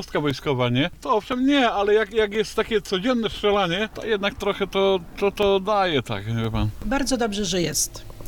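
Evenly spaced ticks recur from 0.30 s to 7.47 s, one every 1.02 s, about seven in all. These are periodic USB or driver dropouts. At each tick, something blocks the audio path briefly and a couple of milliseconds of sound are replaced by silence.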